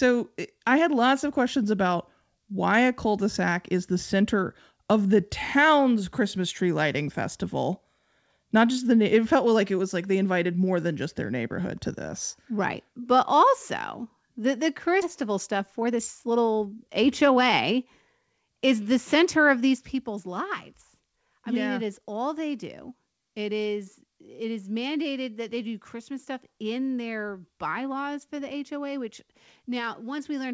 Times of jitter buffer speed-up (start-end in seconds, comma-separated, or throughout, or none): 15.22-18.03